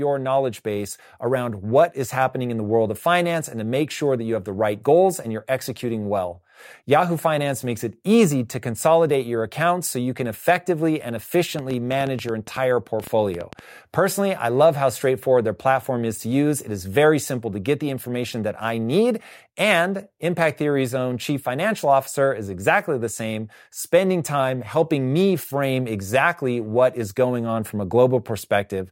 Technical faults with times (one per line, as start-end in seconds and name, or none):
11.59-13.60 train of clicks